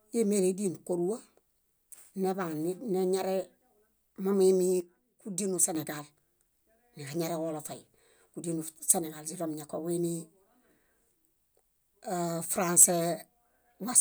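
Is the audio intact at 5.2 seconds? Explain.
No, 5.2 seconds sits inside a one-channel dropout running from about 4.80 to 5.75 s. The speech abruptly falls by about 6 dB there and then snaps back, most likely because one stereo channel went missing, so the mono sum loses half its shared signal.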